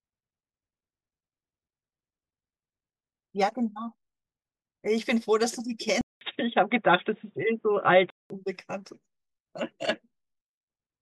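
At 6.01 s the speech drops out for about 0.2 s, then returns dull and boxy, with nothing above 3.8 kHz, a noticeable level shift, and a faint new background noise underneath. At 8.30 s the full-band sound comes back. This is most likely an input switched to a poorer device. A plain codec bandwidth drop would narrow the sound without the gap, the level jump or the different noise floor.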